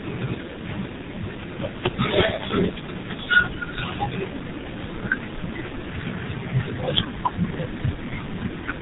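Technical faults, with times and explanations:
Throughout: G.723.1 codec. The speech is muffled and hoarse, with consonants smeared together, which fits heavy coding at around 6.3 kbit/s. The codec keeps nothing above 3.8 kHz and rebuilds the voice from a coarse model refreshed only every 30 ms frame, so fine detail and crisp onsets are lost. A spectrogram shows a flat ceiling near 3.8 kHz with empty space above and blurred, smudged formant bands. On the waveform, transients look softened.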